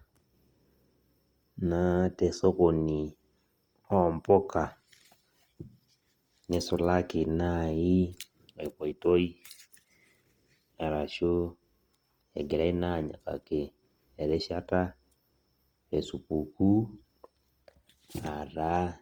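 Throughout, the speech sounds grainy and rough, with noisy highs reaching 20.2 kHz. The likely cause is Opus compression in music mode, which fits a low bitrate near 24 kbps.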